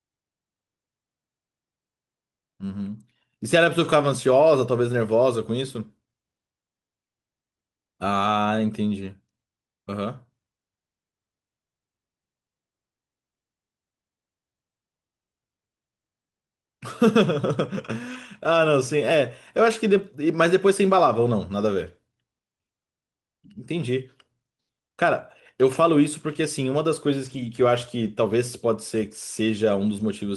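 Lost packets rebuilt from error correction at 3.79–3.85, 9.01–9.07, 18.09–18.15, 19.97–19.99, 25.73–25.75 and 27.25–27.47 s: low-bitrate backup copies fill each gap, so the speech continues but sounds briefly rough and noisy. The spectrogram shows smeared, grainier patches without gaps.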